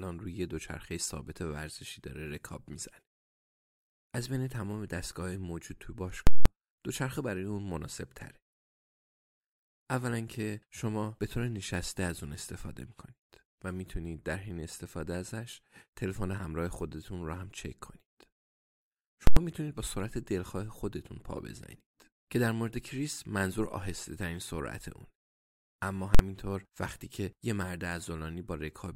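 At 6.27 s, 19.27 s and 26.15 s the speech is interrupted by very loud pops, with no sound passing during each block. These are invalid numbers at full scale: a calculation returned infinite or invalid values, and the output was pinned flat at one extreme, far beyond the audio's own peaks. The blocks last 186 ms, 93 ms and 46 ms, halving each time, which fits blocks of 8192, 4096 and 2048 samples.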